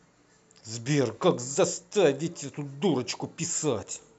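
From start to end the speech sounds dull and gurgling, with a granular edge and upper frequencies flickering in and out. This is likely MP2 compression, consistent with a rate near 80 kbps, starving the upper sub-bands of bits so they drop out while the remaining bands are coarsely quantised.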